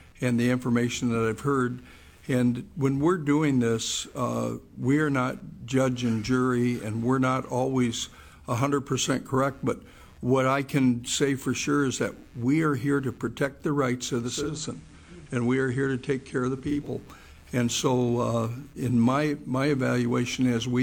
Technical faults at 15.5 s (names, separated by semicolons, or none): computer activity noise; digital radio blending to analogue